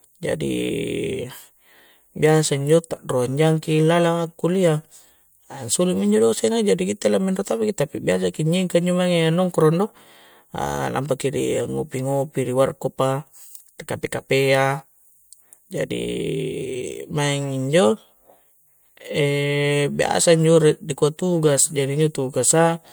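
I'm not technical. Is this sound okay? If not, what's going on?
Yes, this sound is okay, and nothing is going wrong with it.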